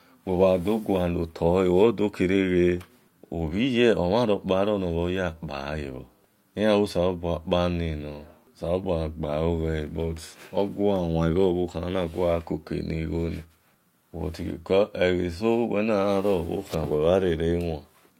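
Nothing in this recording of speech stands out as a technical fault, so there's nothing to flag here.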